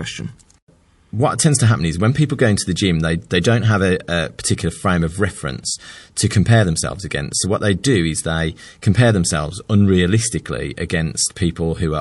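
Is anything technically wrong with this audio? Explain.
Yes, there are two faults: MP3 compression damage across the whole speech clip, and one pre-echo.

MP3 compression is plainly audible from start to finish and is likely the cause of the clip's degraded sound. The damage fits a low rate of around 48 kbps. At that rate the encoder runs short of bits, so it cuts the treble and discards weak frequency components, which drop in and out between frames. The result is a watery, swirly texture, with sibilants turning metallic and consonant onsets smearing.

Pre-echo occurs from 3.41 to 3.44 s, between "the gym they they" and "have a a particular". A short hiss rises about 16 dB above the background for roughly 28 ms before a sharp onset, and the onset itself sounds softened. The transform spread quantisation noise evenly across a window of about 48 ms, so noise sized for the loud attack also filled the quiet gap before it. 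This suggests the encoder never switched to short blocks for this transient.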